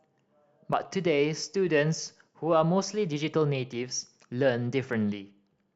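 Clock drift buffer slips run from 0.13 s to 5.53 s: about ten clicks recur every 0.6 s through the speech. Two independent clocks likely disagree by a few hundred parts per million, so a handful of samples is periodically dropped or repeated.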